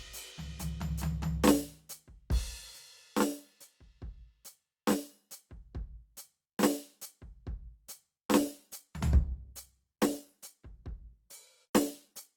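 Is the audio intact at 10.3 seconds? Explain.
No. At 10.3 seconds the music is in an adaptive stream at a lower bitrate, which runs from 8.39 s to the end of the clip. The connection slowed, so the player switched to a leaner version of the same stream. The change is abrupt, with no gap. Coding artefacts rise. The drop in detail fits a fall from about 64 kbit/s Opus to about 16 kbit/s.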